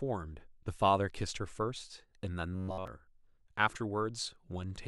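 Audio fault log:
2.53–2.87 s, robotic sound from repeated short buffers: new audio likely arrived too late, so playback kept repeating one short buffer (a 93.8 Hz buzz fits about 10.7 ms) in place of the skipped speech. The speech becomes a rigid, metallic 93.8 Hz buzz for essentially the whole stretch.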